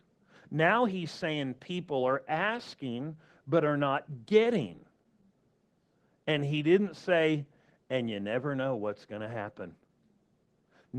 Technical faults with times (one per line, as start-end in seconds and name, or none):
0.00-10.99 Opus voice compression